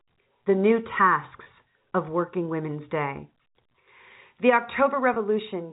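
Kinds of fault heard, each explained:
Packet loss with pitch repetition: At 1.44 to 1.46 s and again at 5.14 to 5.16 s the speech stream drops out for about 20 ms, which fits a single lost packet each time. The receiver covers each gap by repeating the last pitch period, so instead of a click or hole there is a brief held, slightly buzzy tone before normal speech resumes. The surrounding telephone-band G.711 audio, limited below 4 kHz, carries on unchanged.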